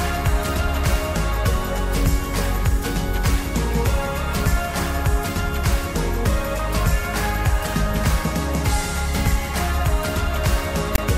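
At 10.95 s, lasting until 10.98 s, the clip has a case of file tags played as audio. A block of text metadata is decoded as sample values, producing a short, hard-edged rasp offset to one side, along with silence where the tag's zero padding is read.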